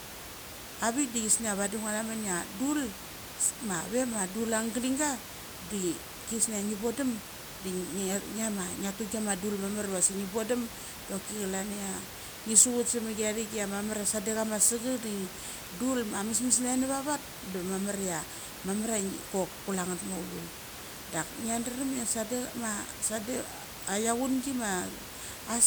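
Nothing here points to a technical fault, just some room noise sitting about 12 dB under the speech as part of the recording itself.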